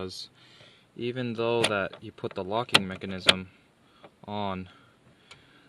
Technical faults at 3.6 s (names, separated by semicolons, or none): none